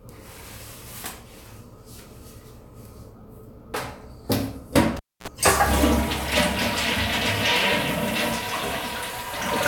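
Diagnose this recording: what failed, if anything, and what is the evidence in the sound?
Analogue wiring: cable pulled and plugged in, 4.97 to 5.28 s. Pop, 261 ms near silence, then 60 Hz buzz from tip contact and a second pop. A digital dropout wouldn't hum.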